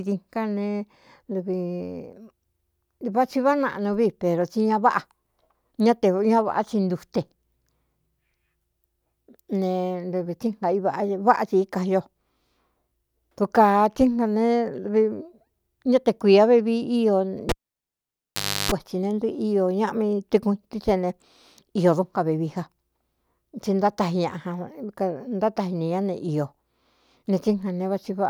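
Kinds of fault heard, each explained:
Cable pulled and plugged in: a live cable came out and went back in, causing a pop, 1.2 s of near silence, 0.33 s of 50 Hz mains buzz, then another pop.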